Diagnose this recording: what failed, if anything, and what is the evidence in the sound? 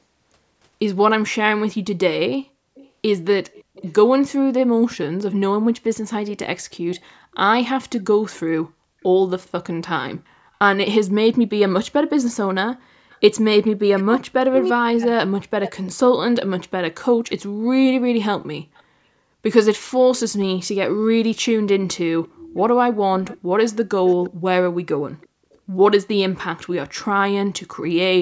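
A faint, delayed copy of the speech trails the talker at 2.75–3.93, 6.98–7.36, 12.22–13.18, 15.86–15.91, 18.75–18.83 and 22.24–26.73 s, about 25 to 35 dB down and lagging by 340–350 ms. This is an echo leak: a far-end loudspeaker's echo canceller likely let through residue that returned in the call processing.

At 5.45 s there is a single low thump, and the speech continues unchanged through to the end. This is a DC step at the converter or analogue input. The waveform's zero line jumps to a new offset at that instant and holds there for the rest of the clip.

Between 12.76 and 13.10 s the room background sinks away, by as much as about 40 dB over roughly 0.3 s, then returns. This is background gated by the echo canceller in the call processing. While the loudspeaker was active, the microphone path was clamped hard, cutting the ambience.

From 13.59 to 15.79 s the talker's speech dips and breaks up in pieces, falling by about 40 dB for roughly 1.5 s in total. 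This is speech suppressed in double talk, likely because the call's echo canceller could not separate the talker from loudspeaker echo while both sides spoke, and turned both down.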